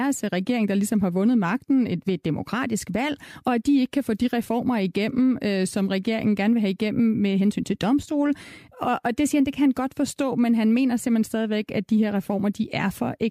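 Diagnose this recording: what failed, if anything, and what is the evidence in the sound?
Nothing failed here; listening through the speech recording, I can't hear anything going wrong at any stage between the microphone and playback.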